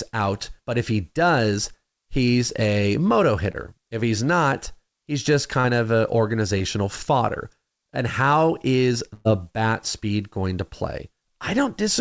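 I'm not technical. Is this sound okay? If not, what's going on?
No. This speech has two kinds of dropout. Short concealed packet loss occurs at 3.52 s after "does he's a moto", at 5.60 s, and at 6.58 s after "of an". Each time, a few hundredths of a second of the call never arrived, so the receiver patched the hole by stretching the last sound, leaving a quick smear or wobble. A burst of packet loss follows at 9.14 to 9.27 s, between "how is" and "bat speed going to". It is much longer, so the patch becomes a held buzz or fading hiss, and a piece of speech is actually missing.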